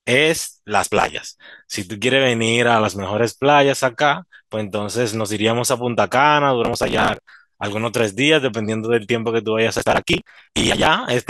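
Processor overload crackle appears at 0.83 to 1.18 s, 6.65 to 7.32 s and 9.76 to 10.86 s. Tiny buffers of roughly 5 ms repeatedly miss their deadline and are skipped, leaving hard-edged gaps that build into gritty tearing over the speech, longest in the final burst.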